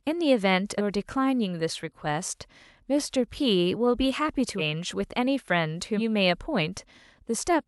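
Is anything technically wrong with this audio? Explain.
Yes. The speech has compressed frames skipped at 0.77–0.81 s, 4.58–4.62 s and 5.97–6.01 s. Whole coded frames, which sound about 46.4 ms long, never reach the output, so playback jumps forward by roughly 200 ms, 200 ms and 100 ms, which fits a handful of frames lost each time. Each jump leaves a join in the speech, with the following material arriving early.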